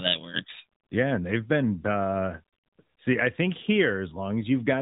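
Speech that sounds boxed-in and buzzy for the whole clip, with nothing above 3.9 kHz and a plainly audible synthetic edge, is the signature of the AMR narrowband mobile codec. AMR-NB samples at 8 kHz and rebuilds speech from a vocal-tract model fed by a handful of pulses per frame. At the moderate rate this damage fits, around 10.2 kbps, fine detail is lost and the result sounds like a phone call.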